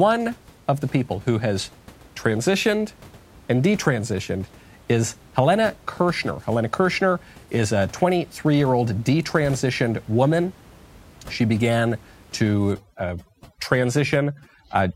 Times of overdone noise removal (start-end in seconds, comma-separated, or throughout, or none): 12.72-14.95